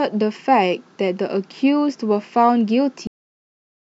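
At 3.07 s the speech has a cut-off end: playback stops mid-sound and falls straight to digital silence, with no decay, for the remaining time. The final buffers of audio were never written or played out, so the recording simply ends abruptly.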